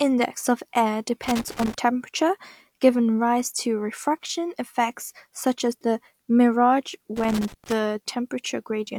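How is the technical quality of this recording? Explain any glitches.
The speech is interrupted twice by loose connector crackle. From 1.23 to 1.74 s, just after "of air" and before "temperature giving rise", and again from 7.16 to 7.73 s, after "such as the mirage", the sound breaks into an irregular scratching burst. A worn or dirty contact in the signal path is rapidly making and breaking as it shifts, chopping the audio. Any DC on the line turns those make-and-break moments into pops.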